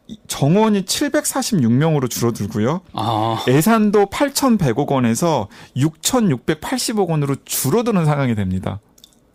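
No technical faults can be heard anywhere in this speech recording. There is no point in the clip where anything audible needs a timestamp or an explanation.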